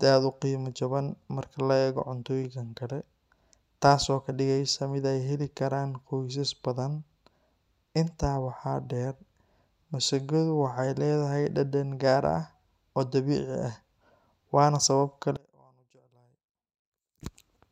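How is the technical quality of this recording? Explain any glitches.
There's one real glitch, near the end. From 15.37 to 17.21 s the speech drops by about 32 dB and turns faint. That's likely one channel inverted: the centred content cancels when left and right sum to mono, leaving only their faint difference.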